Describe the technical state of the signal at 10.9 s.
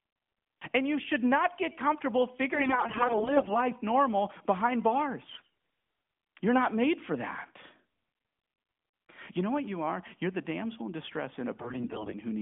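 At 10.9 s the signal is intact, with no fault there beyond the light, band-limited character of the AMR narrowband mobile codec path it was carried through.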